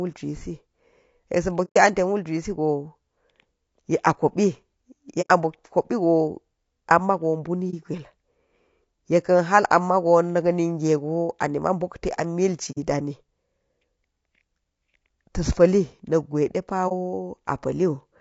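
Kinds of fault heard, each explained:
Low-delay AAC compression: The speech sounds rough and grainy throughout, with noise between the harmonics and a thin, synthetic-sounding top band. This is likely the low-delay AAC used for video calls. Its short frames resolve pitch poorly, and the damage fits about 32 kbps.
AAC frame loss with muting: Stretches of coded audio went missing, and the decoder replaced them with silence. The overlapping windows fade the sound out and back in. This leaves soft-edged holes at 1.64, 5.21 and 12.71 s and brief dips at 7.70 and 16.88 s, lasting between 30 and 120 ms.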